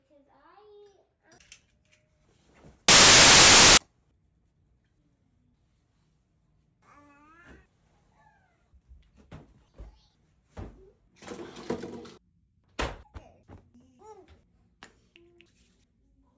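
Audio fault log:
2.88–3.77 s, file tags played as audio: a burst of very loud white noise lasting just under 0.9 s, starting and stopping with hard edges and no fade. The decoder has read an embedded cover picture as if it were sample data. Compressed image bytes are close to random, so they map to uniformly spread sample values across the whole amplitude range, which is heard as very loud broadband static until the audio data resumes.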